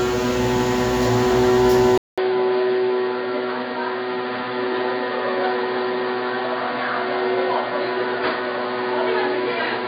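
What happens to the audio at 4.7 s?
An input switched to a poorer device is in effect at 4.7 s, part of a change that begins at 1.98 s and lasts to the end. After a 200 ms silence at 1.98 s, the sound comes back narrower, with nothing above 4.8 kHz, somewhat quieter, and over a new, faint noise floor. That pattern likely means the recording moved to a lower-grade microphone or a headset's call profile, leaving the sounds dull and boxy.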